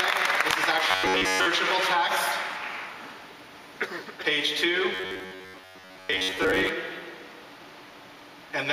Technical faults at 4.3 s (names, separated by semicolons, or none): none